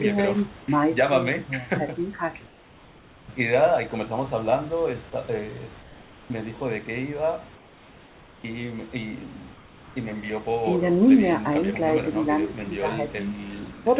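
From 2.46 to 3.28 s, 5.82 to 6.30 s, 7.56 to 8.44 s and 13.72 to 13.86 s, the room background becomes a flat, featureless hiss about 3 dB quieter. This is likely comfort noise in place of the background during transmission pauses.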